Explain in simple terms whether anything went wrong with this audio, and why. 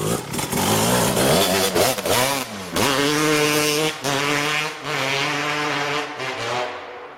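Hard clipping runs through the whole recording. The signal was pushed louder than the recording chain could handle, so the tallest peaks were sliced flat. Only a small fraction of moments are affected, but each loud peak carries a brief crackle or rasp.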